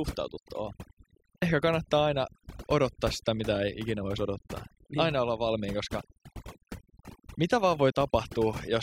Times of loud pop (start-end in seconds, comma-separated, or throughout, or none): none